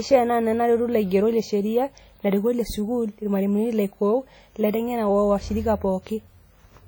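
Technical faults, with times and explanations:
Throughout, WMA compression: the speech sounds washy and ringing with a hiss that breathes along, likely from heavy transform coding at a bitrate fitting about 32 kbps.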